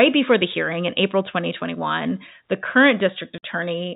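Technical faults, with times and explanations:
3.38–3.43 s, packet loss filled with silence: 50 ms of lost packets was replaced by silence after "the current", cutting a hard-edged hole in the speech.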